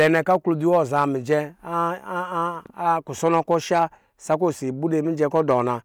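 Hard clipping hits this speech in five bursts: 0.00–0.36 s, 0.73–1.34 s, 3.26–3.83 s, 4.32–4.45 s and 5.22–5.60 s. Peaks overran the stage by about 2 to 5 dB and got sliced flat, so you hear a gritty crackle riding the loud parts, harshest early on.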